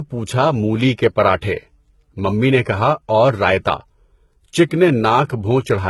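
Transcoding between lossy codecs runs throughout the speech. Two layers of coding artefacts are heard together. The grainy, synthetic-sounding top end of a low-rate HE-AAC encode sits over the milder smearing of an earlier encode, and nothing lies above 19.9 kHz. The likely cause is a Vorbis encode near 64 kbit/s later re-encoded as HE-AAC near 16 kbit/s. The second codec spends its small budget on the first codec's errors and adds its own.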